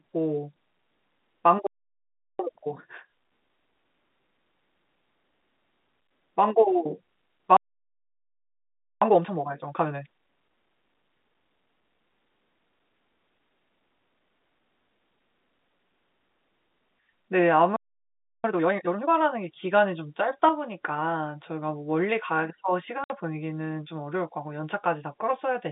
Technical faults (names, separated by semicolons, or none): playback stall; time-compressed catch-up; packet loss filled with silence